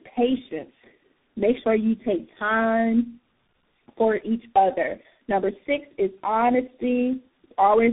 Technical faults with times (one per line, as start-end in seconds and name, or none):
0.00-7.93 tandem speech coding